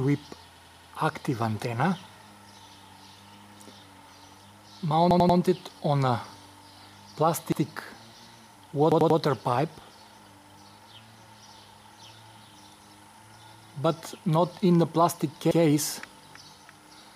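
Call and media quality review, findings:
Repeated buffer: stutters at 0.56–0.93 s (four extra plays), 5.11–5.39 s and 8.92–9.20 s (three each), 7.52–7.62 s and 15.51–15.60 s (one each). The same 93 ms chunk was replayed with hard joins. Playback underrun, which fits a 4096-sample buffer.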